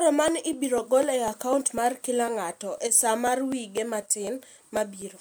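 From 0.28 to 5.02 s, periodic USB or driver dropouts skip about a millisecond of audio every 0.25 s, producing regular ticks over the speech.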